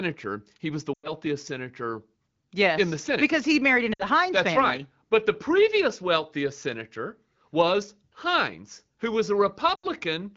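At 0.94 to 1.12 s, 3.93 to 4.04 s and 9.75 to 9.86 s, lost AMR speech frames cut out about 100, 60 and 80 ms of this AMR-WB speech. The decoder repeats the last good settings with falling gain, so the sound sinks to near silence and returns rough. On a spectrogram each one shows as a short, fading vertical gap.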